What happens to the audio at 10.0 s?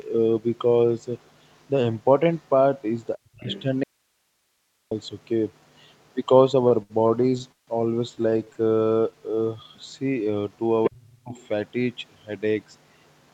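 At 10.0 s you're in the middle of a jitter buffer slow-down, running from about 9.01 to 10.74 s. The receiver's buffer ran low or had just raised its target delay, so it stretched the speech by repeating pitch periods, adding roughly 257 ms. Playback drops to about 86% speed at the same pitch, so everything sounds drawn out.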